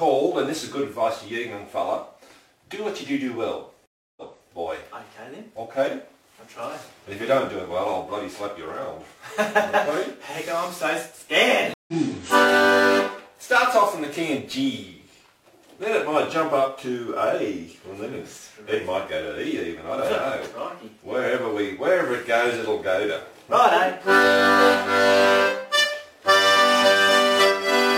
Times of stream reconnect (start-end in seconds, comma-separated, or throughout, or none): 3.86-4.49, 11.74-11.93